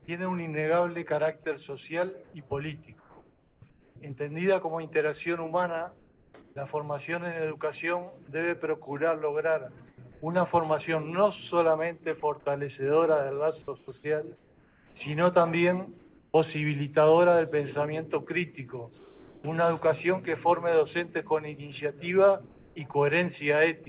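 Between 2.24 and 3.96 s, and again from 5.98 to 6.56 s, there is comfort noise in place of the background, likely because the sender's discontinuous transmission stopped during pauses. The real background gives way to a steady, featureless hiss for about 0.98 s and then 0.5 s.

At 9.65 s a sudden gain jump of about 4 dB sets in, likely a digital gain change applied without a ramp. Sound and background step up together and stay louder to the end.

From 9.78 to 16.34 s the sound is chopped by the voice detector, which likely toggled between sending and muting several times. About 1.36 s in total is replaced by comfort noise, so the sound breaks up.

Comfort noise in place of the background returns from 18.98 to 19.44 s, with the background about 29 dB below the loudest parts and the fill about 3 dB quieter than the real background. It comes back once more from 22.46 to 22.94 s, about 0.32 s, in the same band-limited G.711 A-law character, with nothing above 4 kHz.

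At 22.92 s the sound is dropped by the voice detector, which likely treated a quiet tail as background and stopped sending. About 20 ms of sound disappears into the comfort noise, clipping that edge.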